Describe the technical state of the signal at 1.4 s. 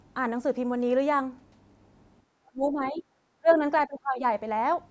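At 1.4 s the signal is intact, with only the ordinary call microphone processing audible, its bandwidth topping out around 8 kHz and the lowest bass trimmed as that processing normally does.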